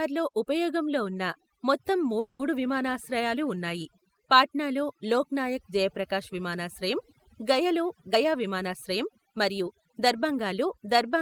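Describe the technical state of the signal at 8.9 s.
At 8.9 s the speech is inside a jitter buffer speed-up running from 8.13 to 10.34 s, just after "నాయక్ జయప్రకాశ్ విమానాశ్రయం గయలో". The receiver trims short pitch-period slices to drain excess buffered audio, about a fifth of a second in total, so delivery runs at 109% speed with unchanged pitch and sounds hurried.

Overdone noise removal is also present here, as it is across the whole clip. Bands near the estimated noise floor are pushed down hard, taking quiet voice detail with them, which leaves a lowered background that breaks up into twinkling specks.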